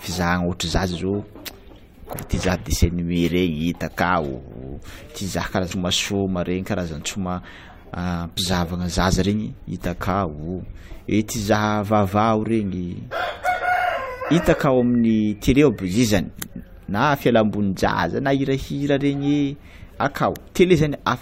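At 5.70 s the speech lurches forward, losing around a third of a second. These are compressed frames skipped: the decoder dropped a run of 21.3 ms frames, which fits roughly fifteen missing frames.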